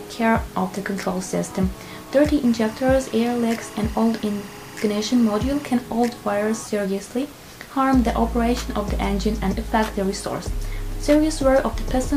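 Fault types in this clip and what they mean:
Timecode bleed: Linear timecode from a nearby track or cable has leaked into the audio. From 2.45 to 5.70 s a chirping warble sits behind the sound, flipping between tones near 1 and 2 kHz. It is roughly 20 dB down. Its rhythm fits 24-frames-per-second code.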